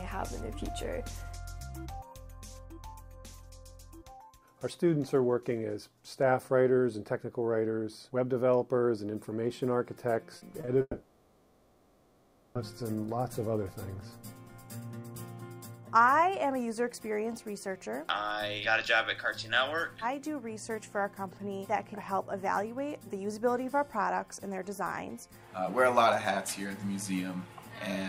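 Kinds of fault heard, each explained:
Short concealed packet loss: at 10.37 s and 10.61–10.69 s, 20 to 40 ms gaps were patched over, showing as smeared, blurred harmonics on a spectrogram.
Long network dropout: from 10.81 to 12.57 s a synthetic, decaying fill replaces the audio, likely from lost packets; the waveform envelope shrinks before sound resumes.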